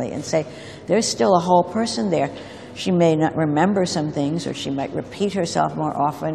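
No technical faults can be heard anywhere in the audio, and the signal stays continuous and stable throughout.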